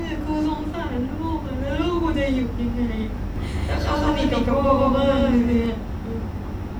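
From 3.36 s to 5.66 s the speech has a doubled audio track: an identical full-band copy sits roughly 150 ms behind, at about the same level, with no decay or room colour. It switches on and off abruptly, likely from a second, slower capture path.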